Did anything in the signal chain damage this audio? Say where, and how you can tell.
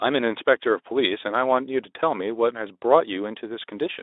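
No, nothing in the chain has harmed this speech; it comes through a Speex coder at around 15 kbps on a telephone-width band of about 300 Hz to 3.7 kHz, and the slight coding texture that leaves is just what that path normally sounds like.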